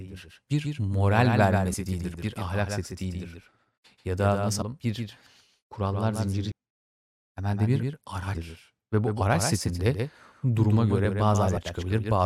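A doubled audio track runs through the whole speech. A second full-band copy trails about 150 ms behind, roughly 5 dB quieter, likely from a slower duplicate capture path.

Damaged data in a compressed stream hits at 1.73, 4.61 and 6.51 s. The decoder misreads the corrupted frames and briefly loses sync. Each is a short glitch.

At 7.83 s there is an underrun with held sample. The output buffer ran dry for 0.67 ms and the waveform froze flat. Playback resumed where it stopped, so only a faint tick is heard.

Further damaged-data blips occur at 8.34 s and 11.56 s. Between them, at 11.05 s, another held-sample underrun flattens the sound for 1.33 ms, again with only a soft tick.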